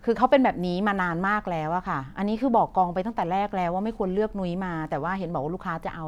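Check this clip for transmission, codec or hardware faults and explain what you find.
No transmission, codec or hardware faults can be heard anywhere in the speech; the signal stays continuous and intact throughout.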